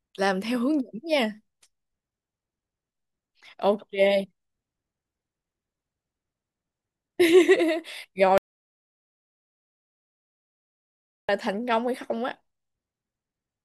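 At 8.38 s the speech cuts off abruptly into silence, with no room tone, and returns mid-flow at 11.29 s. This audio dropout to silence, about 2.9 s long, likely came from the input being lost while silence was recorded.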